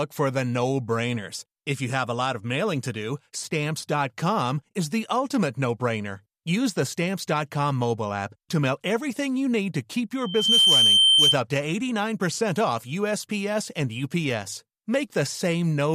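At 10.20 s a loudspeaker feedback squeal breaks into the speech and lasts until 11.38 s. A microphone is hearing the loudspeaker it drives. At one frequency the loop returns more signal than it sends, so that frequency keeps growing on its own. Here it is a single tone at 3.1 kHz. It swells within about a third of a second. It then sits roughly 10 dB above the speech as a piercing whistle before it stops.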